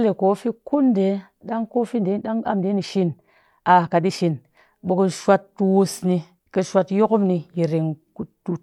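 From 1.94 s to 4.38 s the speech abruptly runs at about 1.45 times its normal pace while the pitch stays where it was, the mark of a time-stretched section. The likely cause is software squeezing this stretch to fit a shorter length, discarding small slices of the waveform to hold pitch constant. Those dropped slices make the delivery sound rushed, before the original pace returns at 4.38 s.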